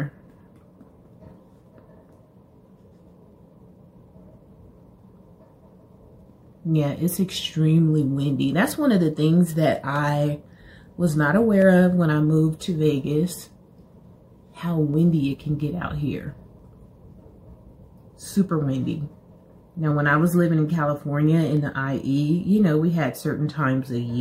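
From 1.66 s to 23.23 s there's a click every 1.66 s, around fifteen in all. That steady rhythm points to clock drift buffer slips, likely two clocks about 100 ppm apart, with the buffer dropping or repeating a handful of samples each time.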